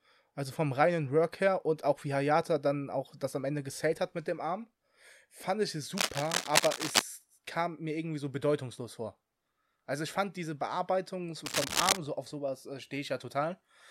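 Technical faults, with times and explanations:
5.97–7.02 s and 11.45–11.98 s, cable scratch noise: two bursts of dense, ragged scratching and rustling ride over the speech, roughly as loud as the speech itself, for about a second and then about half a second. The likely cause is a worn cable or connector being moved, its contact resistance jumping about. Unlike hum or steady hiss, the noise is irregular and comes and goes with the movement, and unlike a single click, it is a cluster of crackles rather than one sharp tick.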